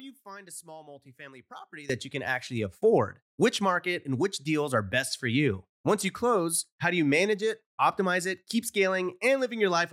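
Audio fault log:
0.0–1.9 s, one channel inverted: the speech drops by about 18 dB to a faint copy, with the centred voice nearly gone. The likely cause is one stereo channel with reversed polarity, so the shared centre content cancels when summed to mono and only the small inter-channel difference survives. On a waveform this opening stretch shows a sharply reduced amplitude, and a spectrogram shows faint energy until 1.9 s.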